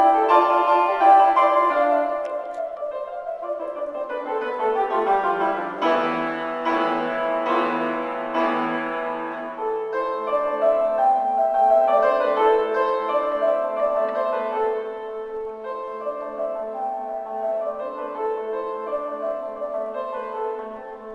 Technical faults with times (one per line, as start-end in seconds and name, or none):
none